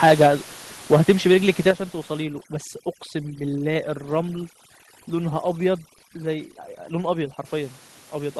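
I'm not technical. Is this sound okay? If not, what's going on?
No, there are three separate problems, and they follow one another.

From 0.92 to 1.69 s there is microphone overload. The loudest moments of the speech have a harsh, crackly, gritty edge. This is most likely because the microphone's input volume was set too high. The strongest peaks ran past the most the converter could handle, so their tops were sliced flat. Only a small share of the sound was cut this way, but it is enough to hear as distortion on those peaks.

At 1.71 s the microphone volume is stepped down. Right after that distorted stretch, the whole sound, speech and background together, drops noticeably quieter in one sudden step rather than fading. The likely cause is the calling software noticing the overload and lowering the microphone's input level in a single move. It fixes the harshness, but it leaves an abrupt jump in loudness.

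From 2.22 to 7.45 s there is overdone noise removal. A noise-cleaning process is working far too hard. The background noise of the room, which earlier sat well below the speech, drops and leaves small twinkling, chirpy specks. The speech itself loses some of its quieter parts, because they resemble the background closely enough that the cleaner removes them too.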